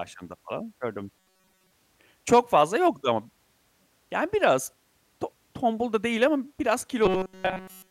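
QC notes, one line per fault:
1.19–1.72 s, robotic sound from repeated short buffers. Most of the speech here becomes a rigid metallic buzz near 188 Hz, likely from a roughly 5 ms buffer being replayed while fresh audio is skipped.
7.06–7.91 s, robotic sound from repeated short buffers. The same 188 Hz buzz replaces all the speech to the end, likely from one short buffer repeating continuously.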